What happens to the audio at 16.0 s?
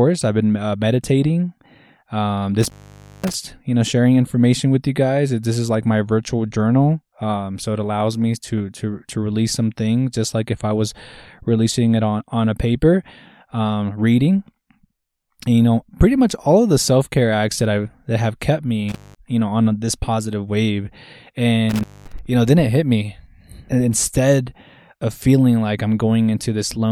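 Nothing goes wrong at 16.0 s: the speech carries on intact through that moment, with no break, click, dropout or change in its sound.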